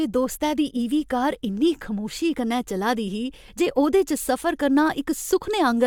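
Nothing stood out on listening to this speech recording.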